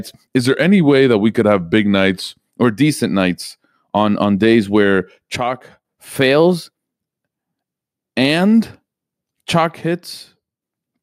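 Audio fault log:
0.40–2.48 s, drift correction step: the speech runs about 6% slow and drops roughly a semitone (109 cents) before snapping back just ahead of "or decent nights on". This is likely a clock-sync resampler stretching playback to refill its buffer.
5.36–5.85 s, one channel drops out: right after "on on days where", the level falls by about 6 dB and then recovers. One stereo side has likely vanished, leaving half the mono sum.
6.15–6.99 s, drift correction step: the speech runs about 6% fast and sits roughly a semitone (102 cents) high, then returns to normal. This is likely the same rate-matching stage, this time draining its buffer.
9.81–10.62 s, one channel drops out: the level sags by about 6 dB again and then comes back. This is likely one channel cutting out, with only the surviving side feeding the mono mix.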